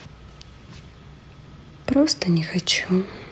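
At 1.47 to 1.49 s the speech jumps abruptly forward with no gap, two parts of the speech butted together. This is a skip ahead: about 0.7 s of audio was discarded, likely by an overflowing jitter buffer, while later audio was already queued.

From 1.57 to 3.28 s the speech sounds hurried, running at 110% speed without any rise in pitch. This is a jitter buffer speed-up: the receiver removed short pitch-period slices in succession, cutting roughly a fifth of a second to shrink its excess delay.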